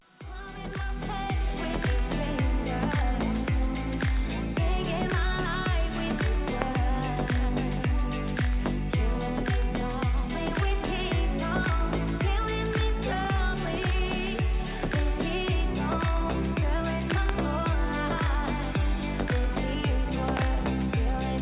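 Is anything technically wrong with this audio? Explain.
Yes. There are loud pops at 6.62 s, at 17.11 to 17.31 s (two pops), and at 20.37 to 20.44 s (another pair). Each peaks roughly 20 dB above the surrounding sound. The likely cause is a sudden voltage step or pulse from a plug, switch, static discharge or driver glitch, which the downstream circuitry shapes into a short thump. Unlike a dropout or a codec glitch, nothing is lost: the sound carries on underneath, through a call path whose bandwidth stops at 4 kHz.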